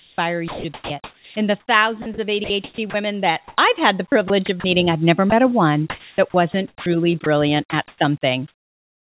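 Sound chopped by the voice detector affects this speech clip from 0.0 to 2.94 s, 3.48 to 4.64 s and 5.9 to 7.26 s, where 1.22 s, 0.22 s and 0.54 s of speech give way to synthetic noise, likely because the sender's detector repeatedly stopped and resumed sending. Sound dropped by the voice detector occurs at 5.3 s, where a 20 ms piece of speech is lost to comfort noise, likely because the detector mistook it for background. Comfort noise in place of the background runs from 7.88 s to the end, with 0.68 s of the real background swapped for smoother generated noise, likely from discontinuous transmission during the pause. The call path itself carries nothing above 4 kHz, which points to a narrowband call codec such as G.711.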